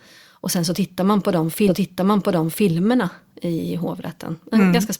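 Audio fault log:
1.67–2.67 s stream segment repeated: after "tittar man på de", one second of speech plays again. The same segment was queued twice, leaving a small blip at the jump back.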